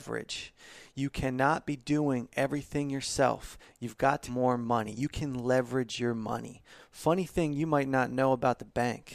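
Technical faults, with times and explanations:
4.27 to 4.33 s, stream segment skipped: the speech jumps abruptly forward with a brief blip lasting about 60 ms, and the flow no longer joins up across the cut. The likely cause is a segment of the stream failing to load, so the player carried on from the next one and a stretch of the programme never played. On a waveform this shows as a hard discontinuity with a short spike; a spectrogram shows a thin vertical broadband line where the harmonics break off.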